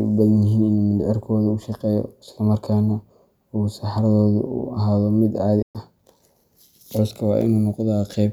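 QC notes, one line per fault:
5.62 to 5.76 s, Bluetooth dropout: speech cuts abruptly to silence, then resumes further along, likely from late packets to the headphones being discarded.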